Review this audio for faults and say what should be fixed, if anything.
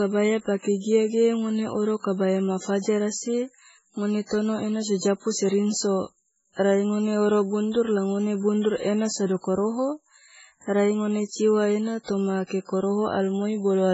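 Throughout the speech, the sound is watery and swirling, with chirpy, metallic sibilants, smeared consonant onsets, and nothing above 7.7 kHz. That is likely heavy MP3 compression: the damage points to a very low bitrate, around 16 kbps, so the encoder truncates treble and lets weak frequency lines flicker between frames. To prevent it, record and deliver in a lossless format, or encode MP3 at a far higher bitrate.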